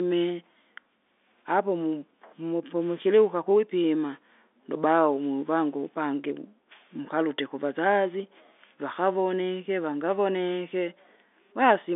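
No faults can be heard anywhere in this speech.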